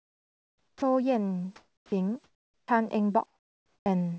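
A short speech clip over a call path, where the sound tops out around 8 kHz, which fits a wideband codec like G.722. In the pauses, comfort noise replaces the real background: from 0.0 to 0.82 s, 1.56 to 1.92 s, 2.24 to 2.68 s and 3.26 to 3.86 s the room tone turns into flat, featureless hiss, about 11, 3, 9 and 8 dB quieter respectively. That's likely discontinuous transmission, with the receiver synthesising filler while the sender stays silent. Two restarts also show onset clipping by the voice detector, with 70 ms missing at 0.75 to 0.82 s and 50 ms at 1.87 to 1.92 s. The sound jumps in without its soft attack, likely because the detector reacted late and comfort noise covered the gap.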